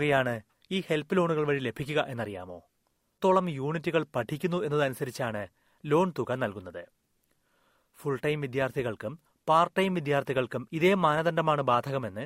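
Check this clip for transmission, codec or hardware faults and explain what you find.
One fault turns up, at 3.17 to 3.21 s. The speech jumps abruptly forward, with a short blip of about 30 ms marking the join before talking resumes from a later point. This is likely a stream segment skipped: one chunk of the segmented stream failed to arrive or load, so the player abandoned it and carried on with the next segment, leaving a gap in the content rather than a pause in time.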